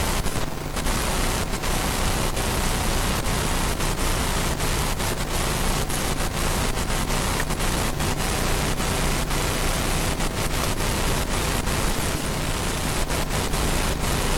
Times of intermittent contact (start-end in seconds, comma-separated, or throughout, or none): none